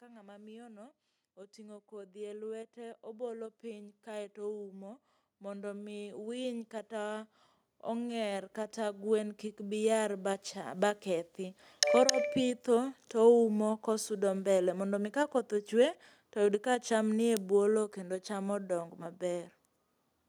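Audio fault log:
0.05–12.3 s, automatic gain rising: the automatic gain control judged the input too quiet and slowly raised its gain by about 21 dB, so speech and background noise swell together.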